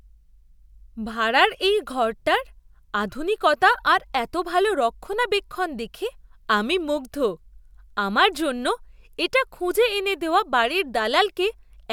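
Across the whole of this speech recording, no technical fault can be heard in the signal.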